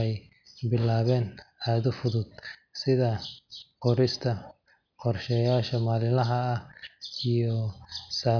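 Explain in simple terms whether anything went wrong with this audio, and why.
Nothing went wrong with this speech recording. Listening through it, no technical problem can be heard at any point, so there is no fault to explain.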